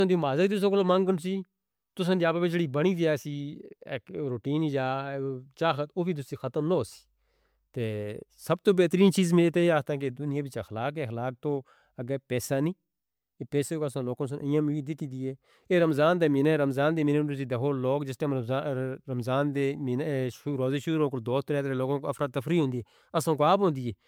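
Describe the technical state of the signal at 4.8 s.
At 4.8 s the speech carries generation loss, present throughout the clip. It sounds swirly, hollow and smeared, with blurred attacks, more than the bitrate alone would explain. The likely cause is repeated MP3 re-encoding, about seven passes, each quantising on a shifted frame grid.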